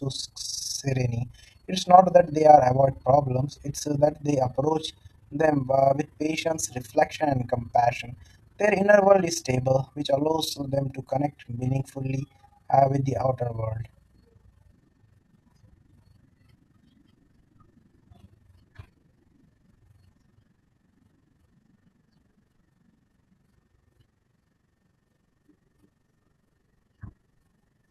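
From start to finish the speech carries overlap-add ripple: the frames were windowed and rejoined with an overlap that does not sum to constant gain, so the level dips by about 11 dB once per frame, roughly twenty times a second, giving a rough flutter.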